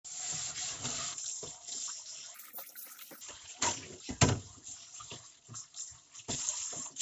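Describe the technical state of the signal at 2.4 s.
At 2.4 s the sound is inside a wrong sample rate fault running from 2.34 to 3.21 s. It plays at double speed and a full octave high, which fits 16 kHz material played at 32 kHz. A spectrogram shows every component shifted up an octave and squeezed in time, and the waveform cycles are half as long.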